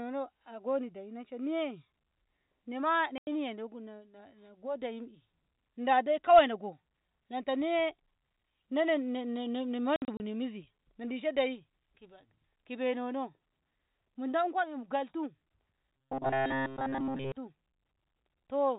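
At 3.18 s, right after "nema na", packet loss filled with silence cuts a 90 ms hole, and near 9.96–10.2 s four more packets are lost, scattered over 240 ms, the longest run 60 ms. Both fit 30 ms packets. Each appears as a flat, empty waveform stretch and a blank vertical band on a spectrogram, with hard edges.

From 15.97 to 17.32 s the speech becomes a rigid metallic buzz at 134 Hz, likely robotic sound from repeated short buffers of about 7.5 ms replayed throughout. The spectrogram shows evenly spaced horizontal harmonics, and the waveform repeats one short shape. The narrow G.711 telephone band stays below 4 kHz.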